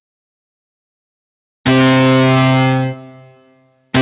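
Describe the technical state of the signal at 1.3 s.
At 1.3 s the sound pumps and thins, with sustained parts and tails sinking by roughly 10 dB while attacks pass through. This is a noise suppressor applied to music or sounds, active throughout the clip, treating steady content as noise. Above it, the call path's band ends at 4 kHz.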